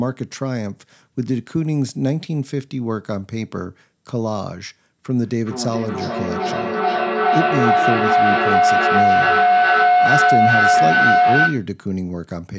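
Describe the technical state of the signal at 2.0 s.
At 2.0 s the speech is intact, with no fault present; the call microphone processing is simply doing its normal job, trimming the lowest bass and leaving nothing above 8 kHz.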